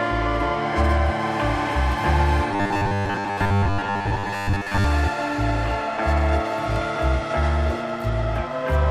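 Robotic sound from repeated short buffers runs from 2.51 to 4.84 s, where the audio turns into a rigid metallic buzz at 100 Hz. The likely cause is a 10 ms buffer being replayed for most of that stretch while new audio is skipped.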